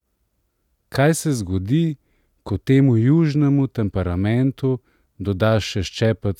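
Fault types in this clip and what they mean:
No fault types are present in this clip.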